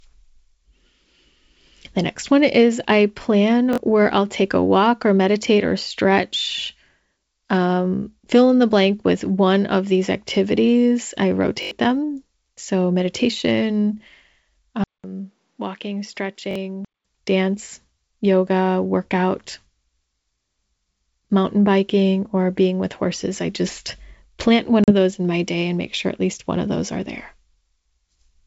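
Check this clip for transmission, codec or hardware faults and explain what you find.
Three kinds of fault are present in this speech recording, carried over G.722 wideband telephone coding at 64 kbit/s.

Repeated buffer, at 3.73 s, 11.63 s and 16.51 s. The first falls between "one is I plan" and "where I'll take a". Each time new audio arrived late and the device replayed its last block, about 21.3 ms long, which fits a 1024-sample buffer. The block plays twice more at 3.73 s and 16.51 s and four more times at 11.63 s, each repeat with a hard join. The result is a short stutter or buzz, and roughly 40 ms of speech is lost in the first and third events and around 100 ms in the second. It differs from packet loss because material is repeated, not blanked.

Input switched to a poorer device, from 14.84 s to 17.05 s, just before "dance yoga workout". After a 200 ms silence, the sound turns duller and quieter. 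The level drops about 10 dB, nothing is left above 7.6 kHz, and a new noise floor sits about 45 dB below the speech. A change of microphone or a headset profile is the likely cause. Unlike a dropout, the altered tone and background noise persist across the whole span.

Packet loss on an ADPCM call, from 24.84 s to 24.91 s, between "I just plant one" and "those in my day". Roughly two packets, 40 ms of audio, were replaced by silence, leaving a hole with hard edges. The decoder's predictor and step size then no longer matched the sender's, so the speech resumes briefly at the wrong level or roughened before settling within some tens of milliseconds. That mistracking after the gap distinguishes it from a repeated buffer.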